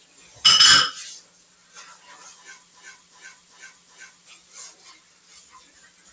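Throughout, a noise suppressor applied to music or sounds treats steady parts and decays as noise. Level swings by about 10 dB, so the sound pumps and thins. From 1.56 to 1.71 s, the sound is cut by the noise suppressor. It sinks by about 4 dB. From 2.74 to 4.27 s, a broken-record loop repeats a 0.38 s fragment four times back to back. This likely comes from a stalled player or stream, and the audio that belonged there is lost. From 5.04 to 5.29 s, the suppressor cuts the sound again, pulling it down by about 4 dB for roughly 0.3 s. Nothing above 8 kHz is heard, which fits a wideband G.722 call path.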